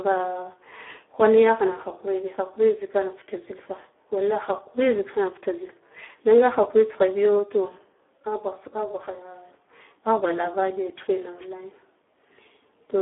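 From the start to the end, the speech carries heavy Speex codec damage. The band is confined to a telephone-style line band of roughly 250 Hz to 3.5 kHz, with nothing above 3.8 kHz, so the sound is dull and boxed-in. With so few bits for the excitation signal, the voice turns hoarse, buzzy and noisy, which fits a low narrowband bitrate around 8 kbps.

From 11.37 to 11.48 s, a wireless microphone noise hit lasting about 0.11 s cuts across the speech. The FM radio link fades as reflected signals cancel, and the receiver noise rises over the voice. It is heard as a brief swish of static before the signal recovers.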